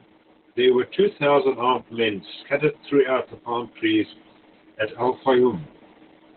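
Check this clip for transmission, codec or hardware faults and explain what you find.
One codec fault runs through the whole speech clip: Opus voice compression at a very low rate. From start to finish nothing reaches above 4.2 kHz, so the encoder has fallen back to narrowband, coding the speech with its SILK linear-prediction layer alone. The excitation is quantised coarsely, which fits a rate around 8 kbps in 20 ms frames. The damage is heavy. The speech sounds muffled, hoarse and faintly robotic, and the faint room noise about 49 dB below it is bandlimited along with it.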